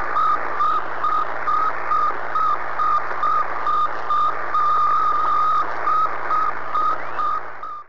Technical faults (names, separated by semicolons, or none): none